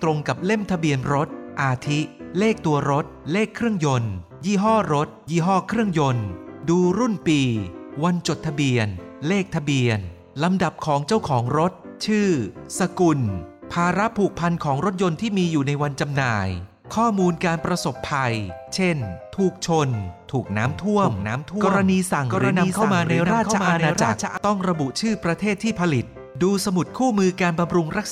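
A slower capture path likely added the audio again: from 20.65 to 24.37 s, a doubled audio track trails roughly 0.7 s behind, about 5 dB quieter.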